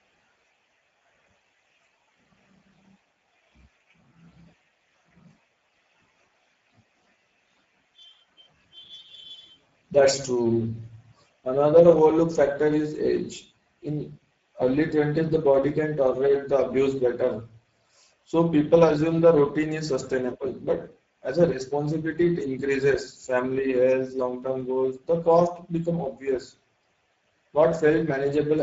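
Throughout this speech clip the voice sounds rough and hoarse, with a grainy, noisy texture, and nothing is present above about 7.7 kHz. These are plainly audible Speex codec artefacts. Speex is a CELP speech codec that models the voice and spends its limited bits on the excitation signal. Here that budget is thin, consistent with a rate near 10 kbps, so fine detail is replaced by coarse approximation.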